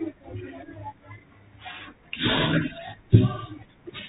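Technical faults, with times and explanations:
Throughout, Bluetooth CVSD headset codec: one-bit delta coding removes everything above 4 kHz, lays granular hiss under the speech and roughens s sounds where steep peaks outrun the adaptive step. A spectrogram shows a hard ceiling at 4 kHz over a speckled noise floor.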